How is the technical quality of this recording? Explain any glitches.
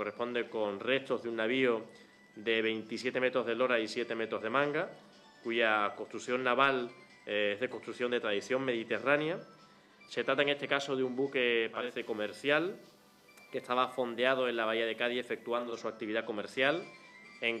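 The recording has one glitch, a digital radio blend to analogue. From 11.68 to 15.85 s the receiver lost its digital signal and cross-faded over about 320 ms to the station's FM broadcast, then faded back. During that stretch a steady hiss sits roughly 40 dB below the sound and the level drops by about 1 dB. The hiss comes from the FM path's noise.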